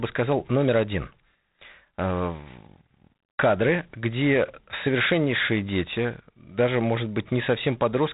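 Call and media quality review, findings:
G.726 ADPCM coding damage across the whole clip. Harsh, rasping hiss riding on the speech and rising with its level. Band stops at 3.8 kHz. Codec stage probable. Coarse adaptive difference coding, grain level which fits 24 kbit/s. Damage plainly audible.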